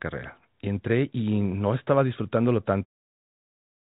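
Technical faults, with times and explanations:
No technical faults are audible.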